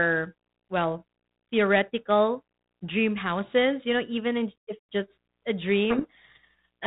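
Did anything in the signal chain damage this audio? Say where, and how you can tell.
Yes, at the codec stage. Right after "in if just a", from 5.9 s to the end, the speech drowns in harsh, grinding distortion. That's a codec payload misread: the G.726 code words arrive in the wrong bit order, so the decoder rebuilds nonsense from otherwise valid-looking data.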